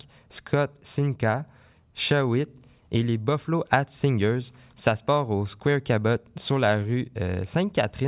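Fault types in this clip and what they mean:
No faults detected in this speech recording; nothing to report.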